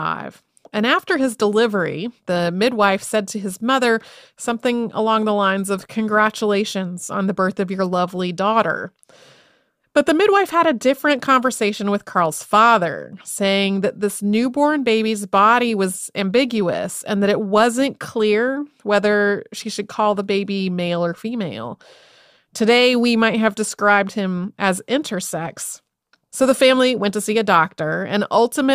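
No technical faults turn up anywhere in the speech recording, so there is nothing to log.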